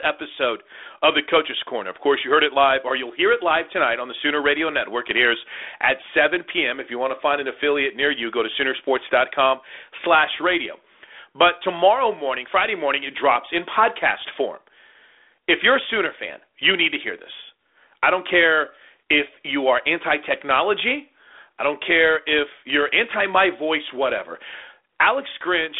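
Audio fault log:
No faults found; the speech sits in a telephone band of 300 Hz to 3.6 kHz with nothing above 3.8 kHz, as expected of a normal G.726 ADPCM link at 32 kbit/s.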